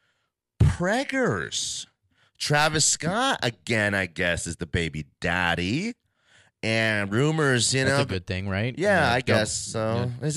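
No technical faults can be heard anywhere in the recording; the speech signal stays continuous and intact at every point.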